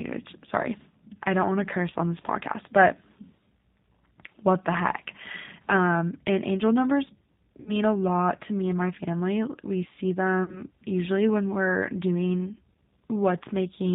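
The whole clip runs through the G.729 codec, and it's plainly audible. Everything above 4 kHz is gone, and the speech has that slightly rough, synthetic edge from being rebuilt out of a filter and a few pulses per frame, which fits an 8 kbit/s stream.

At 7.60 to 7.72 s, right after "and angel numbers" and before "a lot to me", there's VoIP packet loss concealed by the speech codec. About 60 ms went missing, consistent with three lost packets. The decoder stretches the last sound into a fading buzz or coloured noise, and it stays weak for a moment after. The same happens at 10.44 to 10.62 s, just before "usually when we're doing", where around 40 ms was lost, likely two packets.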